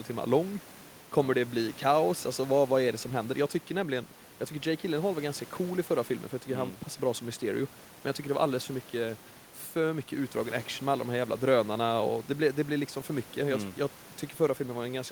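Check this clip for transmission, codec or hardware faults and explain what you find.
No transmission, codec or hardware faults are audible here.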